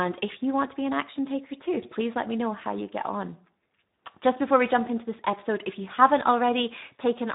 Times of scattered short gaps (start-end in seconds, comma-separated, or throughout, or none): none